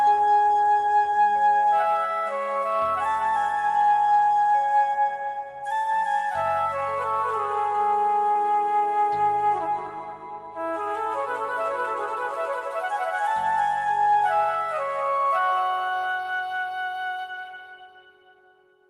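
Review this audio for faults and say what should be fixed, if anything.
At 8.31 to 8.38 s there is a short concealed packet loss. About 40 ms of audio never arrived at the decoder in time. The receiver covered 33 ms of that gap by extending the preceding sound, then crossfaded back into the real signal. The result is a brief smeared, wobbly patch where the original detail is gone. To prevent it, give the stream a larger jitter buffer or a more stable network path.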